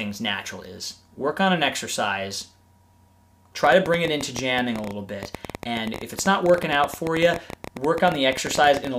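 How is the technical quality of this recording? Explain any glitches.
The recording has a train of clicks from 3.64 s to 8.88 s. A repeating pulse, likely interference from nearby equipment or a faulty connection or power supply, lands about 12.8 times per second at an uneven pace. Around seventy similar clicks, peaking roughly 10 dB above the sound, produce irregular ticking.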